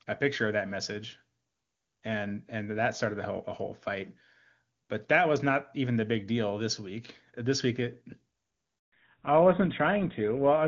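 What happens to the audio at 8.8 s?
At 8.78 s the speech drops out in a handover gap lasting 140 ms, to 8.92 s. While the call switches between networks no speech frames arrive, so the sound fades within a few tens of milliseconds and stays silent until the new link resumes.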